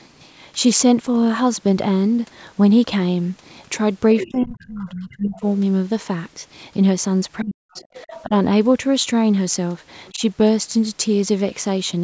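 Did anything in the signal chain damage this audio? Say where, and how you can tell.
Yes, at the call processing stage. The echo canceller likely left part of the loudspeaker signal in the microphone path, so the other side's voice leaking through can be heard at 4.19–4.82 s, 5.36–5.41 s, 7.42–8.23 s and 10.06–10.14 s. It sits roughly 10 to 30 dB below the talker.

The same stage causes speech suppressed in double talk. While both sides overlap, the canceller likely fails to separate the talker from the echo and turns everything down. The voice dips at 4.23–5.44 s by around 25 dB, and at 7.41–7.83 s by around 40 dB, nearly cutting out. Smaller dips of about 10 dB follow at 8.23–8.31 s and 10.11–10.22 s.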